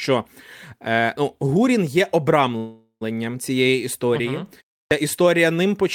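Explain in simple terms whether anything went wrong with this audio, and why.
Two things go wrong in this speech clip.

The first is a call audio freeze from 2.57 to 3.03 seconds. For just under half a second the sound stalls. The last sound is stretched into a fading buzz or hiss that ends in a brief silence of about 90 milliseconds. Then the talking picks up again with "цієї історії". The likely cause is that the incoming audio was held up on its way, so the player ran out of sound and had to fill the wait. Nothing is lost. The speech is simply pushed about 0.44 seconds later.

The second is a clipped start after a pause, at 4.85 seconds. A short pause of about 0.3 seconds comes first, and the speech after it begins too suddenly. About 64 milliseconds of its opening is missing. This happens because the playback device drifts into a resting state during the quiet and needs a moment to wake up. 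That first sliver of sound plays before the device is ready, so it gets swallowed.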